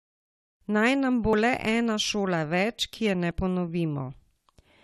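At 1.33 s, after "nam bo", and at 3.31 s, after "več ki je ne", the speech skips briefly, about 20 ms. This is likely audio missing between chunks, with the two sides butted together at roughly 2-second block boundaries.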